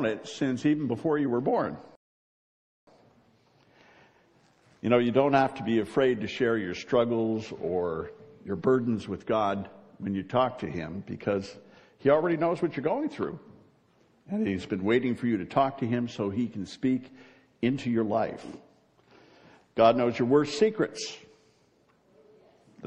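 A rebuffering stall runs from 1.95 to 2.87 s: playback ran dry of downloaded audio, fell silent for about 0.92 s, then resumed exactly where it stopped.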